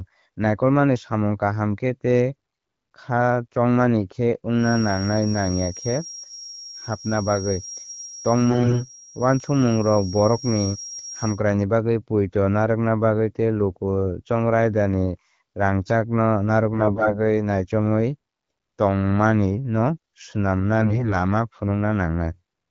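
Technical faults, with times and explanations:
4.54 to 11.43 s, feedback whistle: A thin, steady tone at 5.6 kHz sits behind the speech, about 15 dB below it, swelling and fading slowly in level without building up. This is likely a loudspeaker-to-microphone loop held just short of runaway, so a single high frequency keeps recirculating at a stable gain. It overlaps the first burst of bit errors near 8.5 s, where the whistle continues under the damaged stretch.
8.50 to 8.88 s, 16.74 to 17.18 s, 20.79 to 21.15 s, AMR bit errors: Three short bursts, each roughly 0.35 to 0.45 s long, where the speech keeps its pitch and loudness but turns hoarse, scratchy and gargly. The damage points to corrupted less-protected bits in the AMR frames that still passed the checksum on the important bits. That misplaces the excitation pulses and skews the finer pitch, gain and spectral values. The first and last bursts have a higher error rate, about 10% against about 7% in the middle one. 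Around them, the AMR-WB coding at 12.65 kbit/s shows only light codec damage.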